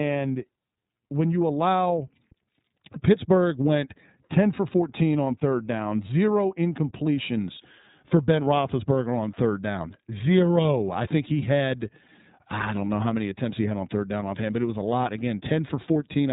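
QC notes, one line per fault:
throughout, iLBC codec: speech is cut off sharply at 3.8 kHz and sounds plainly rough and synthetic, since each 30 ms frame's excitation is coded independently, which fits the 13.33 kbps mode. A spectrogram shows an empty band above 3.8 kHz.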